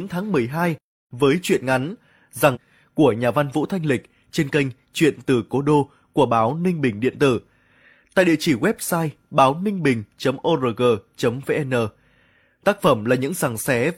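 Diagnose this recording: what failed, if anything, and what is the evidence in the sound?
Network delivery likely dropped a stream segment: one chunk of the segmented stream failed to load and the player carried on with the next. At 2.51 to 2.57 s, between "với truyện ngắn" and "của nhà văn", the speech jumps ahead with a short blip.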